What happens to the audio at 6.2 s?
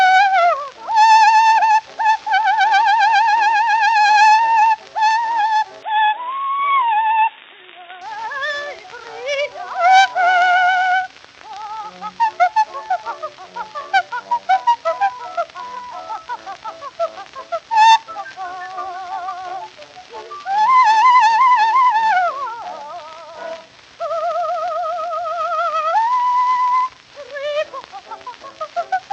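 From 5.83 to 8.01 s the input likely switched to a poorer device: everything above 3.8 kHz vanishes, so the spectrogram shows a flat ceiling there while the waveform's level stays steady.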